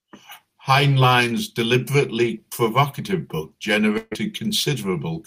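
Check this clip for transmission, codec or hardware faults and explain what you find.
One transmission fault appears in this speech. From 3.97 to 4.13 s, a burst of packet loss: concealment stretches and fades the preceding sound for about 140 ms, then speech resumes with that stretch missing.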